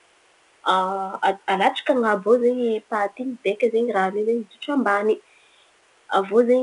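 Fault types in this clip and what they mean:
4-bit ADPCM compression: Each sample is coded as a coarse step from a prediction. A gritty hiss tracks the speech level throughout, which fits an 89 kbps stream.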